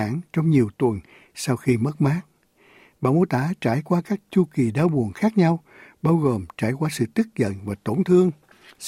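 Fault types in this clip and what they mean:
No audible technical faults turn up in this recording.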